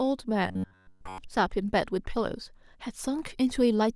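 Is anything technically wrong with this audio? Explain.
Yes. From 0.48 to 1.18 s the speech turns into a rigid, metallic buzz near 94 Hz that only loosely follows the words. This is robotic sound from repeated short buffers, likely from audio arriving too seldom, so a chunk of about 10.7 ms loops throughout while the real speech is skipped.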